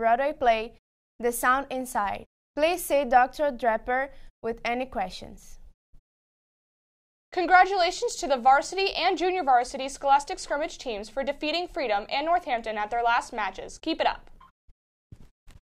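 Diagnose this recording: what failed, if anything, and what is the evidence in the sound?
Nothing failed here: listening across the whole recording, no stage of the chain gives itself away, and there's nothing in the sound that needs diagnosing.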